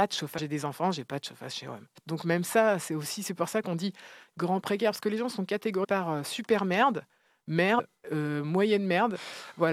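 Four quick blips of damaged data in a compressed stream turn up in this speech: 0.37 to 0.39 s, just before "des enfants j'ai pas"; at 1.95 s; 5.83 to 5.85 s, between "que les gens sont" and "par euh super merde"; and 7.78 to 7.80 s. Each is a corrupted frame the decoder can't read properly. It loses sync, spits out a brief chirp or squawk for a couple of tens of milliseconds, then locks back on at the next good frame header.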